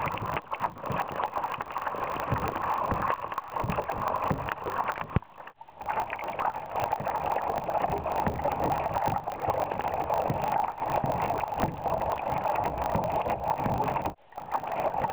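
Block size mismatch (truncated), throughout: each block's tail is discarded, producing a 50 Hz buzz, consistent with 1024-sample writes, and sound running 1.16 times fast at near-normal pitch.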